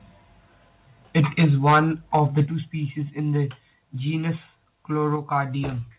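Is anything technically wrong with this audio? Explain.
Yes. Microphone overload, likely from input volume set too high, drives peaks past the converter's limit at 1.16–1.8 s (about 9 dB over), 2.14–2.4 s (about 3 dB over) and 5.35–5.37 s (about 1 dB over). The tops of the waveform are sliced off, giving the loudest syllables a harsh, crackling edge, most severely in the first stretch.

The microphone volume is stepped down, likely by the call software reacting to a too-loud or clipping input, at 1.45 s (about 3 dB), at 2.46 s just before "species in the genus" (about 8 dB), and at 5.16 s (about 4 dB). Each cut makes both the speech and the background drop abruptly in level.

Through all of this, the band stops at 4 kHz, which fits a 64 kbps G.711 call path.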